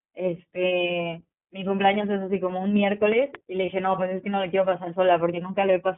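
iLBC codec damage runs through the whole speech clip and is plainly audible. The sound is confined to a telephone band of roughly 150 Hz to 3.4 kHz, so nothing above that survives. Each 20 ms frame's excitation is coded on its own, which gives the voice a rough, slightly synthetic edge. The bandwidth and texture fit the codec's 15.2 kbps mode.

Lost iLBC frames first occur at 0.88 to 0.91 s. About 20 ms of audio is missing, which fits a single dropped 20 ms frame. The decoder fills the hole by repeating the last pitch cycle blended with noise, so there is a brief held, faintly buzzy vowel. Because each frame decodes independently, the voice snaps back almost immediately afterwards.

A loud pop follows at 3.12 to 3.37 s. It is actually two sharp clicks in quick succession, each standing well above the speech, which continues underneath. This is the signature of a sudden voltage step or pulse entering the chain. 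The likely source is a plug, switch, static discharge or driver glitch, with the downstream circuitry shaping each impulse into a short thump.

Lost iLBC frames recur at 3.66 to 3.70 s. Again about 20 ms drops out, consistent with one frame. The same concealment applies: a short buzzy, sustained tone where the pitch cycle is looped with noise, then a clean recovery at the next frame.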